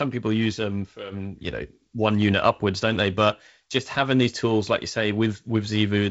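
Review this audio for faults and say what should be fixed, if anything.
No faults found; nothing in this speech needs fixing.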